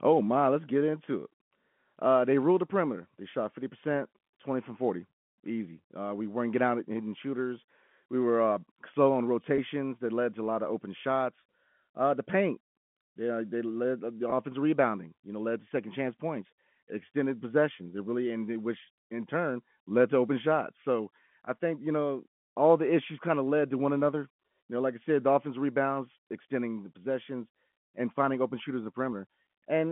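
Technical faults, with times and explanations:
9.56–9.58 s and 14.30–14.32 s, packet loss with pitch repetition: each gap lasts about 20 ms, which fits a single lost packet, and the receiver fills it by repeating the last pitch period. Because the gaps are so brief, they sound like a slight buzzy hold rather than a dropout: the first falls between "were uh slow on" and "that led to a", the second between "they led uh the" and "rebounding you know led", within the 150–3400 Hz telephone band.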